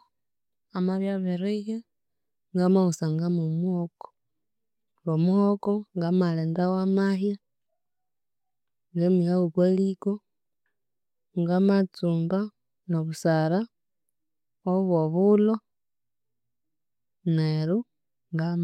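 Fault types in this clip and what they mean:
Nothing here to list, since the speech comes through without any technical faults to point out.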